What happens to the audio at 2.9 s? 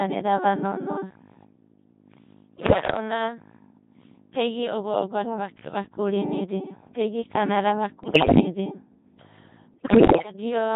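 Bit errors on digital voice radio are corrupting the stream from about 2.56 to 2.96 s, with roughly one bit in ten flipped. Each bad bit resets the pitch, level, voicing or spectrum of a whole frame, so the sound jumps in pitch and loudness and breaks into bleeps, warbles and robotic gibberish. Underneath, the whole clip runs through the Codec 2 vocoder, heavily degraded and consistent with its 2.4 kbit/s mode. The decoder rebuilds speech from sine waves using only pitch, voicing, energy and a spectral envelope, so the speech sounds buzzy and robotic throughout.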